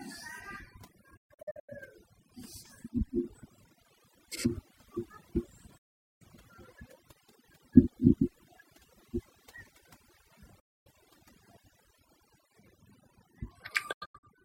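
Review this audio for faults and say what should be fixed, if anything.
Overdone noise removal runs through the whole speech recording. The denoiser pushed individual frequency bands down to nothing wherever they sat close to its noise estimate, and the quieter parts of the voice were cut along with the noise. The background drops and breaks up into twinkling specks. On a spectrogram the floor looks blotchy, with isolated bright specks and ragged, hollowed-out harmonics. Setting the reduction strength lower, so the noise floor is only partly lowered and voice detail survives, would prevent this.

Digital broadcast dropouts cut the sound four times, each with a quick fade of about 8 ms into silence. From 1.17 to 1.73 s several short holes are scattered over about half a second, totalling 0.34 s, with the longest about 0.13 s. There is a solid gap of 0.43 s from 5.77 to 6.25 s and one of 0.26 s from 10.60 to 10.91 s. 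From 13.92 to 14.28 s, 0.21 s is lost in pieces, the longest about 85 ms. The receiver muted whenever frames failed or the signal was lost, and everything sent in those gaps is gone. On a waveform these appear as flat-line gaps with short tapered edges, and a spectrogram shows clean vertical blank bands. Better reception, or error protection with interleaving, would prevent these.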